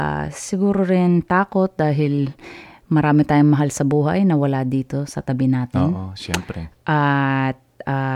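Nothing in this speech recording comes across as a technical fault; it just runs along without any dropouts, glitches or anything else that sticks out to the ear.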